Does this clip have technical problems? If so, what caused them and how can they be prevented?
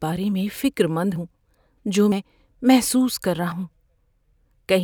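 Yes, there are quick jumps in the speech at 0.32 s (just before "فکر مند ہوں"), 1.16 s (after "فکر مند"), 2.12 s and 3.52 s, each skipping about 40 to 100 ms. That's likely a dropped buffer (overrun): the capture wasn't read in time, so a chunk got overwritten and the two sides were spliced together. A larger input buffer or a higher-priority capture thread should prevent it.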